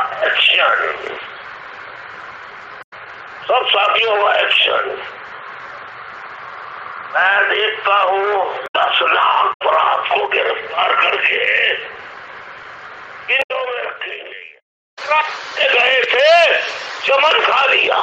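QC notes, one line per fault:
2.81–2.93 s, 8.64–8.76 s, 9.50–9.62 s, 13.39–13.51 s: damaged data in a compressed stream. Each event lasts about 0.12 s. Part of the compressed data was wrong at these points, so the decoder misread or rejected those frames. It then lost sync and had to search for the next valid frame header. The sound breaks up briefly at each spot as a short disturbance or gap, not as steady noise.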